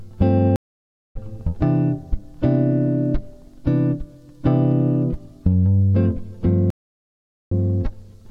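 At 0.56 s the audio drops out for 0.59 s in a stream reconnect: the connection broke, playback went silent, and a fresh decoder picked up mid-stream at 1.17 s, about 0.4 s further on, so material is skipped. The same happens from 6.70 to 7.52 s, with 0.8 s of silence and a skip of about 0.1 s. Each restart fades in over its first frame. A waveform shows flat gaps; a spectrogram shows blank vertical bands.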